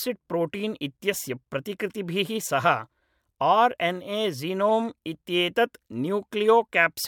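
Speech, with nothing technically wrong with it at any point.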